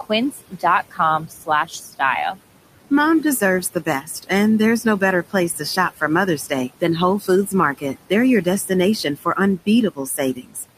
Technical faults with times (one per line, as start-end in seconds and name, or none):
0.00-10.78 noise suppressor artifacts
0.03-2.37 speech cut by the noise suppressor
2.90-4.30 speech cut by the noise suppressor
4.83-10.78 speech cut by the noise suppressor